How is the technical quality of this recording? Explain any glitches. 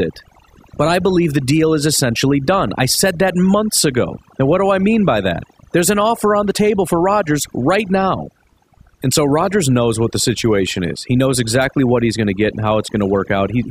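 The main problem is overdone noise removal, and it runs the whole way through. The denoiser was pushed so hard that any frequency band sitting near its noise estimate gets pulled right down, taking softer parts of the speech along. So the background drops and breaks up into little twinkly bits.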